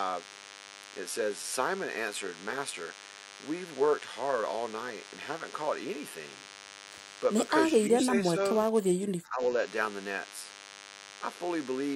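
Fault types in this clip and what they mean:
DECT cordless phone buzz: Throughout the clip there is a thin, steady buzz at 100 Hz, sitting roughly 20 dB below the speech. A nearby DECT handset or base transmits a radio burst every 10 ms, and the audio circuitry rectifies it into sound. On a spectrogram it appears as an unbroken comb of horizontal lines at multiples of 100 Hz, reaching well up the spectrum. In the waveform, silent stretches show regular spikes spaced 10 ms apart.
speech suppressed in double talk: The talker's level sinks twice. From 7.89 to 8.37 s there is a mild dip of around 5 dB over about a third of a second. From 8.71 to 9.41 s a much deeper drop of about 20 dB covers nearly the whole span. The likely cause is an echo canceller that could not separate this talker from the far-end echo, so it attenuated both. The waveform envelope visibly dips in those spans, and the spectrogram shows speech energy fading.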